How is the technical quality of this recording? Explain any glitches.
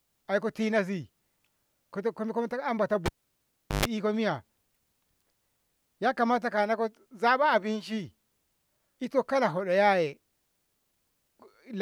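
The recording has one clear glitch. From 3.06 to 3.85 s, the cable is pulled and plugged in. A pop cuts the speech. Near silence lasts about 0.75 s. Then a 50 Hz mains buzz sounds for 0.13 s as the plug tip makes partial contact. A second pop brings the sound back.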